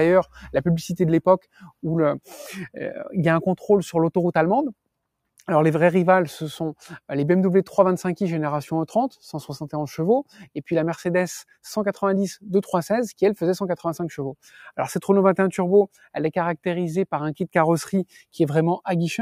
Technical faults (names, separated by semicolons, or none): noise suppressor applied to music or sounds; sound cut by the noise suppressor